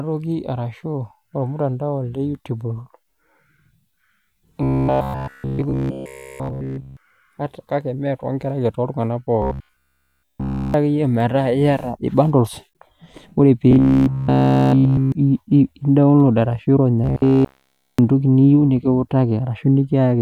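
From 4.63 to 6.97 s, the speech turns into robotic sound from repeated short buffers. It returns from 9.42 to 10.74 s, 13.71 to 15.12 s, and 17.04 to 17.99 s. Each time, a rigid metallic buzz at 66.8 Hz sounds, loosely following the speech. The likely cause is audio arriving too seldom, so a segment of about 15 ms loops in its place. Essentially all of each stretch is repeated material.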